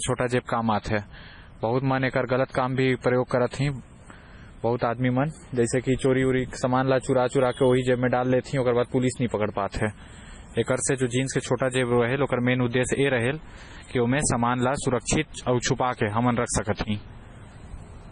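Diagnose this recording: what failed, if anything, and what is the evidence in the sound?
The codec stage failed, likely an MP3 encoder starved of bits. The speech has heavy damage across the whole clip. Nothing is left above 10.4 kHz, so the treble stops at a fixed wall. Weak frequency components drop in and out between frames, which gives the sound a watery, swirling texture. That level of loss fits a very low bitrate, around 24 kbps. The encoder kept only what its hearing model ranked highest.

Pre-echo from the same codec appears between 0.82 and 0.85 s. A short hiss runs for about 36 ms ahead of a sharp onset, and the onset itself sounds softened. The attack landed late in a transform block. The coarse quantisation noise sized for the loud part was spread across the whole block. It therefore filled the quiet stretch just before the attack.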